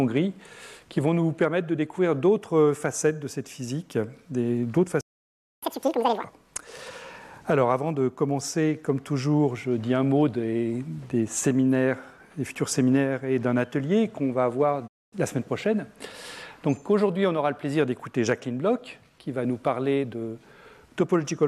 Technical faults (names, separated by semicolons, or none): playback stall; catch-up at higher speed; digital broadcast dropout